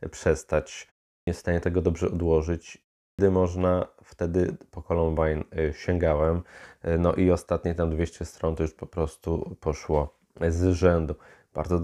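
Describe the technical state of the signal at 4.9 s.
The speech at 4.9 s comes through intact, with no dropout, distortion or other technical fault at that moment.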